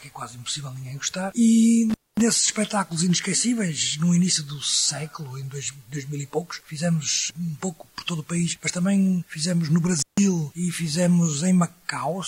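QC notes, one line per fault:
1.90–2.22 s, intermittent contact: the sound drops out for about 234 ms with crackle at each edge and faint hiss between, as a loose connection briefly opens.
9.99–10.20 s, intermittent contact: a second, shorter dropout of about 150 ms, crackling in and out over faint hiss, as the loose contact opens again.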